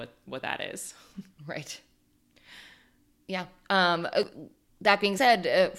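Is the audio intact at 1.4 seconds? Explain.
No. At 1.38 s, right after "what that is", there is audio missing between chunks. A short piece of sound, roughly a twentieth of a second, drops out. The sides before and after are butted together with no gap of silence. It is heard as a sudden skip in the speech. The likely cause is a recorder or processor working in 1.0 s chunks that lost a sliver while closing one chunk and opening the next.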